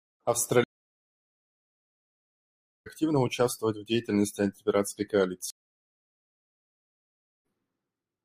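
At 0.64 s the speech cuts to silence for 2.2 s, a stream reconnect: the connection dropped, the player went quiet, reconnected and started a new decoder mid-stream. When sound returns at 2.87 s it has jumped ahead by roughly two seconds, so that stretch of speech is lost. A second reconnect at 5.50 s gives 1.94 s of silence, and playback resumes at 7.45 s only about 150 ms further on, a small skip.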